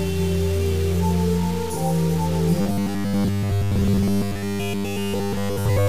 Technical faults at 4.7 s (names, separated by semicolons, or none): low bit depth without dither; robotic sound from repeated short buffers